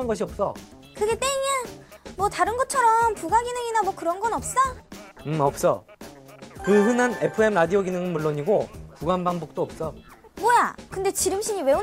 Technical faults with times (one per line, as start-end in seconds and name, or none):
none